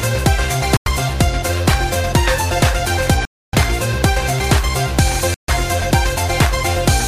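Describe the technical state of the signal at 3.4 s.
At 3.4 s the signal sits inside a gap that most likely comes from a Bluetooth dropout: the wireless link to the headphones failed to deliver audio packets in time, so they were discarded and nothing reached the output. From 3.25 s to 3.54 s the sound cuts to silence, a hole of about 0.28 s that fits roughly a dozen lost frames. It then resumes further along, as if the audio had kept playing.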